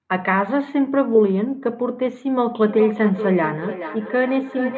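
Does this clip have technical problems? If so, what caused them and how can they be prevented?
Yes. From 2.65 s to the end there is feedback echo between two devices. The speech returns roughly every 0.4 s, peaking about 8 dB below the direct sound, because a nearby device replays this microphone's signal and neither echo canceller removes it. Muting one device, or using headphones, prevents this.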